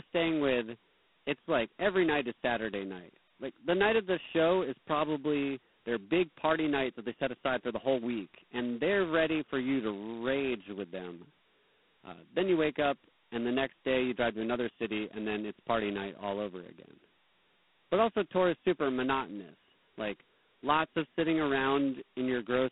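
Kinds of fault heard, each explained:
G.726 ADPCM: The speech is coded as coarse differences from a running prediction, leaving a harsh rasping hiss that swells with each syllable, which fits the 16 kbit/s mode. A spectrogram shows a band of roughly 200 Hz to 3.4 kHz, nothing above 3.9 kHz, and grainy noise filling it.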